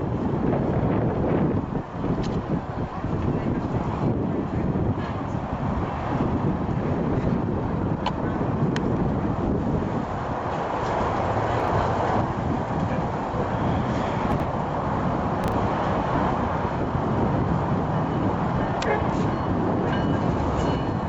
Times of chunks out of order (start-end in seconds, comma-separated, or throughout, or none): 11.60-11.68, 14.32-14.44, 15.44-15.52